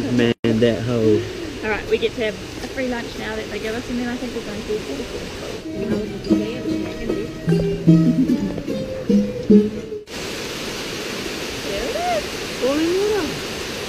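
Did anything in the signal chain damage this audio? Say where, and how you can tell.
Yes. The damage happened at the codec stage, where separately encoded pieces were joined without trimming, leaving a gap at a join of encoded pieces. Each encoder pass adds leading delay and pads its final frame, and that padding stayed in. The result is a gap of about 120 ms from 0.32 s to 0.44 s inside otherwise continuous sound, with smeared edges that leave the truly silent part shorter, after which the audio resumes exactly where it stopped.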